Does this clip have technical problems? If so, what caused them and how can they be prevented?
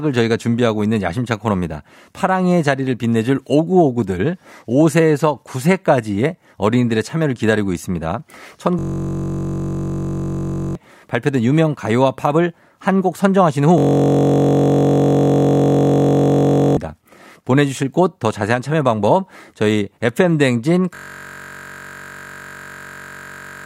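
Yes. A system hang loop occurs at 8.79–10.75 s, 13.78–16.77 s and 20.95 s to the end. Each time, one 21.33 ms slice repeats as a steady 46.9 Hz buzz, which fits a 1024-sample buffer replayed while the system stalled, losing roughly 2 to 3 seconds of speech. To prevent it, fix the driver stall and have the audio device output silence when the buffer is not refilled.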